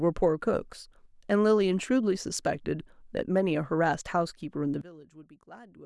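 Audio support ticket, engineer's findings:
Speech drops out hard from 4.81 s to the end at 5.85 s, roughly 21 dB down, leaving a faint residue. Looks like one channel inverted, likely a polarity flip on one leg of the stereo path. Summed to mono, the matching centre content cancels and only the small left-right difference survives. Worth checking wiring or a stray invert switch.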